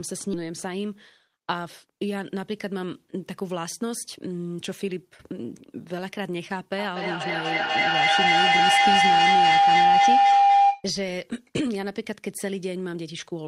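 At 0.33 s, a skip ahead: a stretch of speech, something like 0.4 s, was dropped while later audio was already queued, and nothing was filled in. Playback jumps straight across the hole, so a chunk of speech is simply missing and its two edges butt together.

From 2.35 to 4.35 s comes a jitter buffer speed-up. With too much audio held back, the receiver repeatedly cut out short pitch-period slices, roughly a tenth of a second in total. The speech runs at 106% speed with unchanged pitch and sounds slightly hurried.

From 6.78 to 10.91 s, a feedback howl builds: two devices in the same room closed a microphone-to-loudspeaker loop whose gain exceeded unity. Each pass, about every fifth of a second, reinforced the loop's favoured frequency, giving a tone of around 700 Hz that peaks about 11 dB above the speech.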